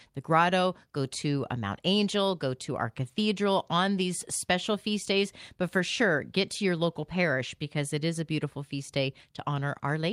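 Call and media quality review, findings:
Nothing stood out on listening to the speech in this recording.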